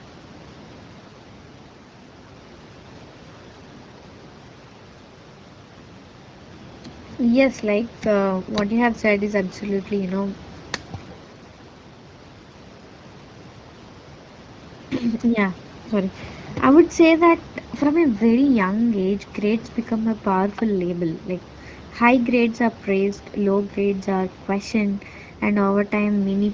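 Nothing stood out on listening to this speech clip.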